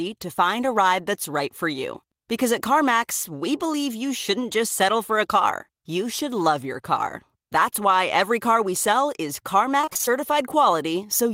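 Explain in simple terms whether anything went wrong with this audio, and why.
Near the end, from 9.81 to 10.09 s, right after "car we sell is", the speech breaks into a choppy stutter. This is repeated packet loss (robotic sound): chunks of the audio stream went missing several times in quick succession. Each hole, none longer than about 27 ms, was patched by stretching the sound just before it, so about half of that stretch is filler. Unlike a single dropout, the breaks come as a rapid run.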